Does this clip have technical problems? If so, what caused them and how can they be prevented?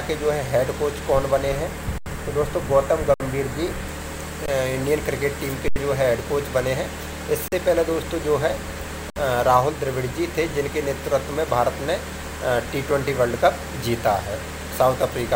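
Yes. The clip has six underruns with a held sample, at 1.98–2.06 s, 3.14–3.20 s, 4.46–4.48 s, 5.68–5.76 s, 7.48–7.52 s and 9.10–9.16 s. The gaps last from 20 to 80 ms. Each time, the output buffer ran dry. The converter froze on its last value, so the waveform goes flat and the sound simply stops. No audio is lost. Playback picks up where it paused, so each restart is soft rather than a sharp click. Prevent this by enlarging the output buffer and giving the audio thread priority so data always arrives in time.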